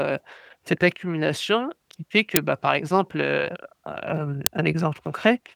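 A short, loud crack cuts into the speech at 2.36 s, right after "accumulation qui fait que" and before "bah par exemple heu". A second crack comes at 4.46 s, after "par exemple heu hem". Each lasts about 5 ms, which fits a 256-sample block. This is an uninitialised buffer: the block was played before any audio was written into it, so leftover memory contents came out as samples.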